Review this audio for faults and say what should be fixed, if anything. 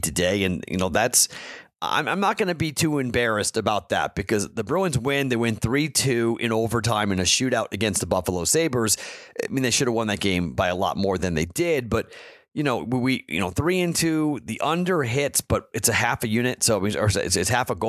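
Nothing in this speech recording needs fixing. No faults can be heard, so no repair or preventive step is called for.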